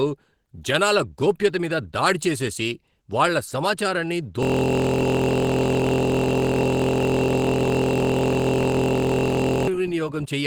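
A grainy, hoarse roughness runs through the whole speech clip, likely from Opus compression at a low bitrate in its hybrid speech mode. From 4.43 s to 9.68 s, right after "దాడి చేసేసి వాళ్ల సమాచారాన్ని", the sound collapses into a steady 43.1 Hz buzz. This is a system hang loop: one 23.2 ms slice, consistent with a 1024-sample buffer, repeats continuously.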